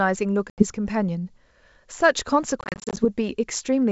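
Packet loss on an ADPCM call cuts a hard-edged 80 ms hole at 0.50 to 0.63 s, then 200 ms of short gaps, none over 30 ms, across 2.61 to 3.05 s. The decoder's predictor and step size lose track, so speech returns slightly distorted before settling.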